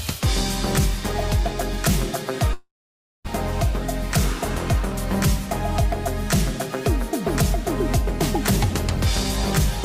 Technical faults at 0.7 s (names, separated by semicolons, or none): none